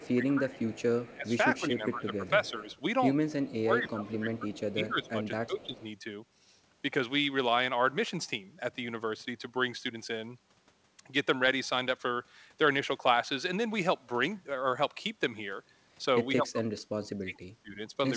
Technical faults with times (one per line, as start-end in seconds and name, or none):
0.00-0.59 speech suppressed in double talk
0.00-3.56 echo leak
1.14-2.69 speech suppressed in double talk
3.63-5.82 speech suppressed in double talk
5.04-5.08 echo leak
5.61-5.83 echo leak
16.40-18.16 speech suppressed in double talk